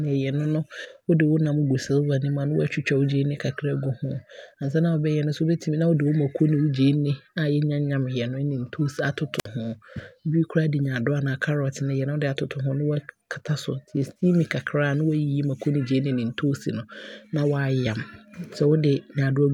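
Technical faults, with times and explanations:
9.38–9.46 s, wireless microphone squelch dropout: the analogue FM radio link fades, so a short burst of hiss rises before the receiver's squelch mutes the output for about 55 ms, leaving a gap of near silence before the speech returns.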